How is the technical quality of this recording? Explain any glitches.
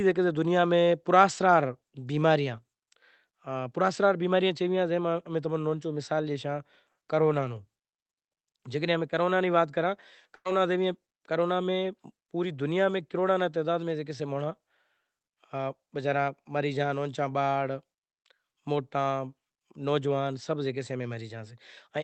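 The speech has one audible glitch, a brief dropout midway through, heard through a call codec that rolls off content above about 8 kHz.

Burst of packet loss, 10.35 to 10.47 s: several consecutive packets were lost or arrived too late to play, so the receiver stretched the last sound into a fading fill for about 93 ms, then resumed with roughly 100 ms of speech skipped.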